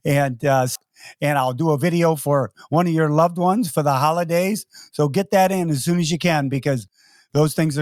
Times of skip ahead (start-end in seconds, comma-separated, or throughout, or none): 0.75-0.77